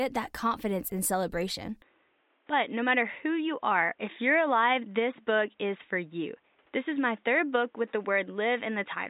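The input likely switched to a poorer device at 1.82 s; from then nothing above 3.8 kHz remains, so the audio turns dull over faint new noise.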